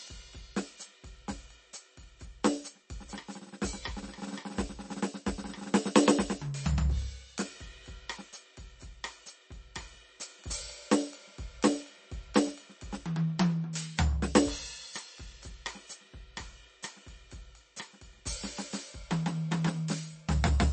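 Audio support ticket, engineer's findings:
Music, full length: treble absent above 8.4 kHz, hard ceiling. Watery, swirling texture on sustained material; metallic chirping on bright transients; attacks smeared. Likely MP3 compression, damage plainly audible, bit budget consistent with roughly 34 kbps. Mechanism: starved encoder lowpasses at fixed frequency, zeroes weak spectral lines. Those lines drop in and out between frames, causing swirl and chirps. Coarse time resolution spreads attack energy before transients, blurring onsets.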